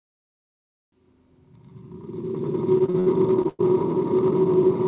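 A call-path recording with nothing above 4 kHz, which fits G.711 mu-law at 64 kbps, and repeated packet loss (robotic sound) from 2.78 to 3.61 s. The holes get patched by stretching the previous sound, so it turns choppy, with the longest gap around 104 ms and roughly a third of that stretch filled in.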